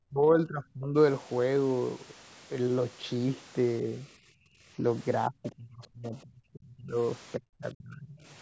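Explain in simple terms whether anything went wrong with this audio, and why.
Several times the echo canceller likely got confused when both sides of the call talked at once. This is speech suppressed in double talk. It turned the talker down sharply from 0.08 to 0.96 s, 5.29 to 6.97 s and 7.38 to 8.25 s, and only slightly from 4.77 to 4.83 s.

While the loudspeaker was playing, the echo canceller also clamped the microphone down hard. This is background gated by the echo canceller. From 4.16 to 4.49 s the room sound drops away steeply for a moment, then comes back.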